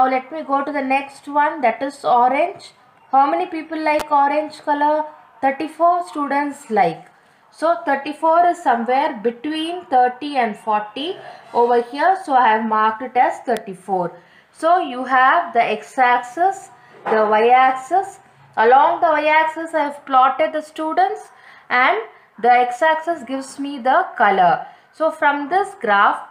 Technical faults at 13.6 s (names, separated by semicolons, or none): electrical switching spike